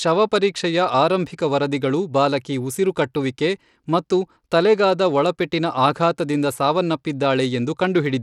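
Bluetooth SBC compression runs through the whole speech clip, plainly audible from start to finish, and the likely cause is a low-bitrate SBC link, with the damage fitting roughly 96 kbps. SBC divides the signal into a few wide sub-bands and hands out bits by a simple rule, so the weaker upper bands get starved and everything is coarsely quantised. The treble flickers and thins, with a gritty grain and some aliasing riding on the speech, and nothing above 21 kHz.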